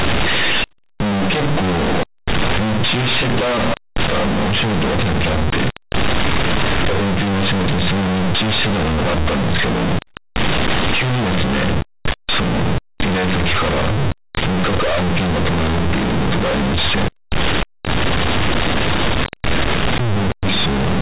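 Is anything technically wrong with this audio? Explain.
Yes. Throughout the clip, companded audio is being read as linear: the speech was encoded as mu-law, but its bytes are played back as plain linear 8-bit samples without the expansion step. Mu-law codes put the sign in the top bit, so every sign change throws the output across roughly half its range, and quiet passages come out as large as loud ones. The result is very loud, buzzy, misshapen audio with heavy noise filling the pauses, within the 4 kHz telephone band of the G.711 coding.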